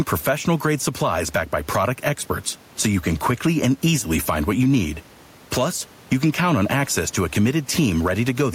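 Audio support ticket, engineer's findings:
Gain pumping, throughout the speech: level ducks around 5 dB under each loud syllable, so levels sound squashed. Likely cause is input gain set way too hot, with a fast limiter clamping down hard. Room noise sits about 35 dB under the speech.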